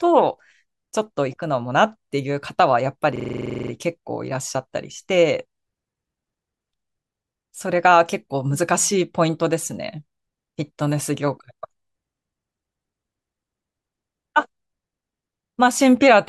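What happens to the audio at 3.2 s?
A system hang loop runs from 3.16 to 3.71 s: the sound hardware kept replaying one 43 ms slice, which fits a 2048-sample buffer, about a dozen times. That gives a 23.4 Hz machine-gun stutter, seen as identical repeating waveform blocks and evenly spaced vertical stripes on a spectrogram.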